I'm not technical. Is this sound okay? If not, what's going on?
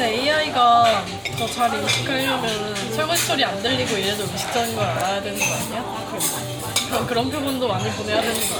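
Yes, nothing wrong can be heard in this recording.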